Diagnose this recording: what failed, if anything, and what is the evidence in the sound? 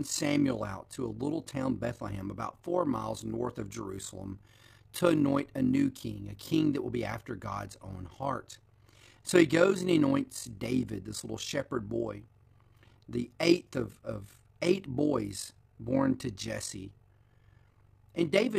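Overlap-add ripple in the call processing stage, present throughout the speech. The level pulses by about 11 dB at around 50 Hz, giving a rough tremolo. Frames were windowed and resynthesised with an overlap whose windows fail to sum to constant gain, so loudness dips once per frame.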